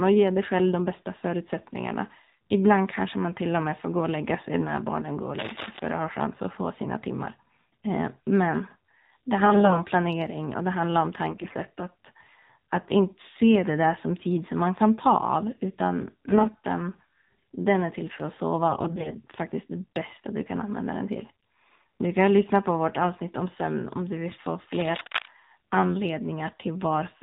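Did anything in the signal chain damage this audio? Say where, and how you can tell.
Yes. Three kinds of damage are audible in this speech clip.

AMR narrowband mobile codec, throughout: at the codec stage the speech was coded with AMR-NB at 7.4 kbps. Nothing above 4 kHz survives, which gives the boxed-in phone sound. The vocal-tract model is driven by only a few pulses per 5 ms subframe at this bitrate, so voiced sounds come out plainly buzzy and synthetic, and any background under the speech turns into a swirling warble.

AMR bit errors, from 9.44 to 9.80 s, 11.28 to 11.55 s, 16.25 to 16.56 s and 18.70 to 19.21 s: these happened at the network stage on a weak radio link. The speech keeps roughly its pitch and level but goes hoarse, scratchy and gargly, worst around 11.3 s, where the corruption is far heavier. The frames' checksum still passed, so they were decoded rather than concealed. 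Flipped low-priority bits misplaced the excitation pulses and put the finer gain and spectral values off.

Cable scratch noise, from 5.38 to 5.80 s and from 24.74 to 25.28 s: this comes from the analogue wiring. Dense, uneven bursts of rustling noise sit over the sound at about -5 dB relative to the signal, and each burst lasts about half a second. The likely cause is a worn cable or connector being moved, which made its contact resistance fluctuate rapidly.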